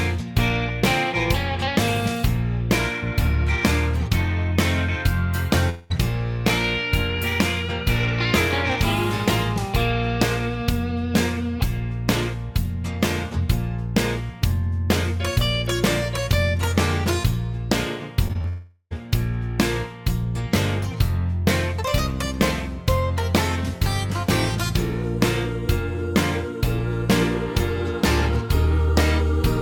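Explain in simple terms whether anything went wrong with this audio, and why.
Yes, two kinds of fault occur.

A long network dropout likely cut off the incoming audio for about 0.2 seconds at 5.69 s and about 0.42 seconds from 18.48 s to 18.93 s. The player stretched the last sound into a fading buzz, with a brief near-silence near the end of the second gap, and then the audio resumes with that stretch lost.

Short concealed packet loss happens three times, at 18.28 s, 18.33 s and 18.42 s. Each time, about 20 milliseconds of audio arrived too late or not at all. The receiver patched each hole by continuing the sound just before it, which leaves a quick smear or wobble just before the longer dropout begins.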